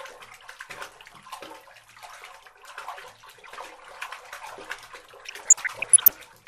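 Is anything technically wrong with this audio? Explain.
Yes, two problems are audible: a constant dull, grainy coloration and a burst of bubbling damage near the end.

Throughout the clip the sound is dull and carries a gurgling, granular roughness. This is likely MP2 compression at a low rate, consistent with roughly 80 kbps. Layer II divides the audio into 32 sub-bands and rations bits among them. When bits run short, upper bands are dropped and the remaining ones are coarsely quantised. On a spectrogram the top end cuts off unevenly, with high bands flickering in and out as blocky patches.

From 5.26 to 6.27 s there is DAB burbling, a bubbling of short noise blips over the programme. Bit errors that slipped past error correction, at a rate of a few in a thousand, corrupted samples across dozens of frames, putting short blips of noise into single sub-bands. A spectrogram shows isolated bright rectangles popping up in single frequency bands, and the waveform shows brief, irregular level spikes.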